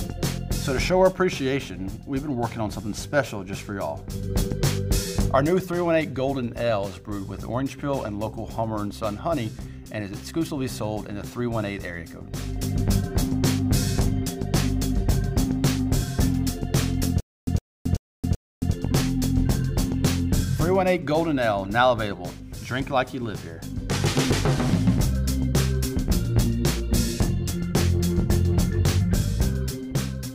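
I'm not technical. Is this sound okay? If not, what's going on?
No. Stutter with silent gaps, 17.20 to 18.73 s: a 112 ms snippet repeats four times, split by 271 ms silences, likely from playback stalling and retrying.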